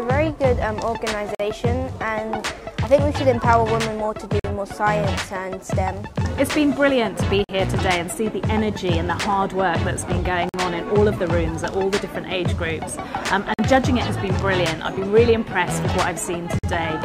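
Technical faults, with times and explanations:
1.35, 4.40, 7.44, 10.49, 13.54 and 16.59 s: gap between chunks. The 3-second blocks are spliced with 48 ms silences, so nothing's lost, but the sound stalls at each join.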